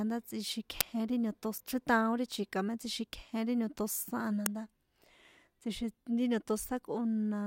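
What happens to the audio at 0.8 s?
At 0.81 s there's an uninitialised buffer: a 5-ms block, which fits a 256-sample buffer, played out stale memory, giving a sharp, loud crack.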